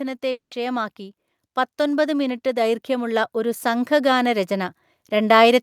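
At 0.31 s the speech breaks off, and what follows until 0.53 s is a fading buzz continuing the last sound, then silence, with about 200 ms of material gone. This is a long network dropout, likely caused by packets that never arrived while the receiver papered over the hole. Unlike a brief glitch or click, the concealment tail audibly decays into quiet, and the speech resumes further along rather than where it stopped.

From 1.77 s to the end, the level climbs steadily. This is automatic gain rising: the gain control judged the input too quiet and kept raising it. What separates it from a talker simply speaking up is that the background noise swells in step with the speech, and the rise is a slow ramp spread over several seconds rather than a jump at a phrase boundary.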